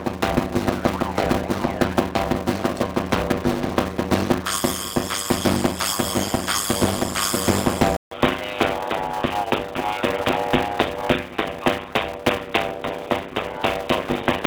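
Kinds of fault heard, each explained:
Block size mismatch (padded): a steady 100 Hz buzz sits over the whole clip, and everything runs at about 0.53 times normal speed. One stage writes short blocks, which fits 256-sample writes, into larger reads, and the remainder of every block is zero-filled.
Input switched to a poorer device: at 7.97 s there is a silence of about 80 ms, and from then to the end the sound is dull, with a faint new noise floor. Likely the input moved to a narrower-band microphone or headset profile.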